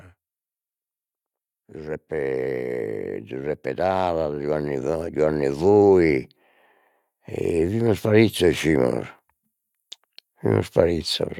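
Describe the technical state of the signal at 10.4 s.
At 10.4 s the signal is intact, with no audible fault at that moment.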